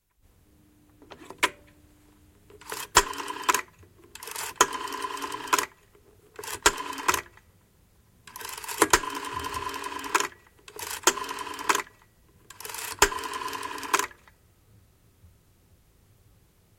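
No technical faults are audible.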